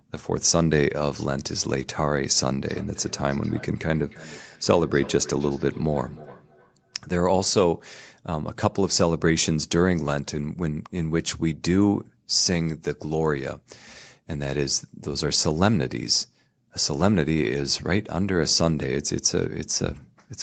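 A speech recording in which, from 2.69 to 7.05 s, each phrase comes back as a thinner, ringing copy roughly every 300 ms, repeating at a steady interval and peaking at about 19 dB below the direct speech. This is feedback echo between two devices: a second device in the same room replays the call, its sound reaches the first microphone again, and neither echo canceller removes audio played by the other. The band-limited sound, with nothing above 8 kHz, comes from the call path.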